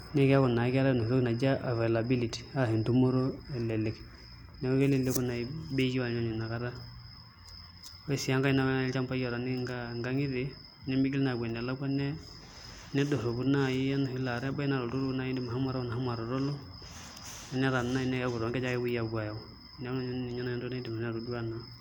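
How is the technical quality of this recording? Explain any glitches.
No glitches can be heard anywhere in this speech recording. Nothing interrupts or disturbs the audio at any point.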